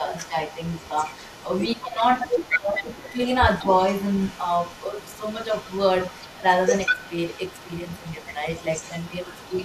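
From the start to 3.25 s, a faint second copy of the speech trails the voice by about 194 ms, roughly 20 dB below it. This is echo leak, and the likely cause is a far end playing the call over a loudspeaker whose echo canceller let part of the microphone pickup through and sent it back. Within that stretch, at 1.75 to 2.01 s and again at 2.52 to 2.76 s, the main voice itself sinks, first by something like 15 dB and then by around 20 dB, before recovering. That is speech suppressed in double talk. While the returning echo overlapped the talker, the canceller likely could not tell the two apart and turned everything down. After a short clear gap, the echo leak resumes at 3.47 s with the same delay and level and runs to the end. Inside it, at 8.16 to 8.2 s, there is one more brief and shallow double-talk dip of only a few decibels.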